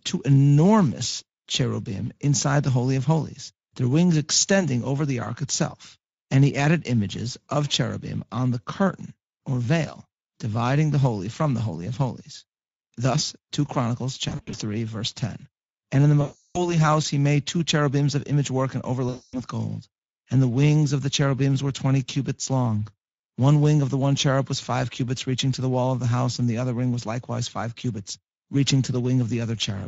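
Throughout, the speech passes through the Speex codec at a setting that sounds like roughly 16.8 kbps. At that rate the CELP coder has too few bits to model the excitation cleanly, so the damage is plainly audible. Every voiced stretch carries a grainy, hoarse roughness where the encoder approximates the residual instead of reproducing it.

Three bursts of VoIP packet loss concealed by the speech codec interrupt this. At 14.29 to 14.55 s, about 140 ms of audio goes missing in scattered gaps across roughly 240 ms, the longest run 60 ms. Longer losses follow at 16.21 to 16.76 s, about 340 ms, and 19.09 to 19.43 s, about 240 ms. Each time, the decoder keeps repeating its last pitch and filter at falling gain, so the speech is stretched out and fades, and stays weak briefly after packets resume.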